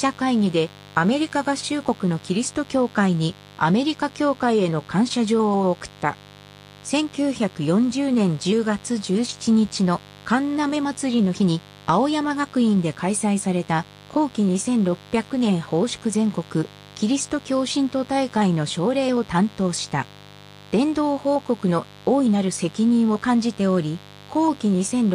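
Mains buzz throughout, roughly 25 dB under the sound: 50 Hz switching spikes make a raspy drone, drawn as stacked horizontal lines up to several kHz.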